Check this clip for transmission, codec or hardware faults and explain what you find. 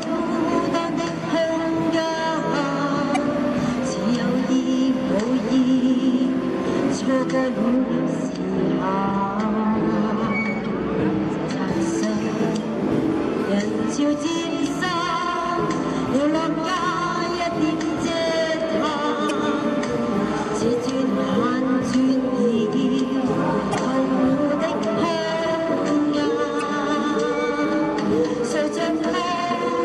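Two faults are present: repeated damaged data in a compressed stream, and de-emphasis applied wrongly.

Damaged data in a compressed stream occurs at 3.12–3.17, 10.64–10.66, 19.27–19.31, 23.71–23.75 and 26.60–26.63 s. Corrupted frames make the decoder lose sync, giving brief glitches.

De-emphasis applied wrongly runs from 7.76 to 11.68 s. An unneeded treble cut leaves 10 kHz about 11 dB below 1 kHz, so the sound turns dull and muffled.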